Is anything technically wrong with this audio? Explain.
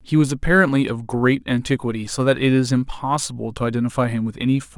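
Yes. The speech carries sample clock jitter from start to finish. The converter's timing wanders by something on the order of a microsecond or two, so each sample is captured slightly off its proper instant. Steep, fast-changing parts of the waveform suffer most, leaving an error roughly 40 dB below the speech. It is heard as a faint hiss and grit on loud and sibilant passages, gone in pauses. On a spectrogram, a diffuse high-frequency haze tracks the speech energy. The waveform looks unchanged.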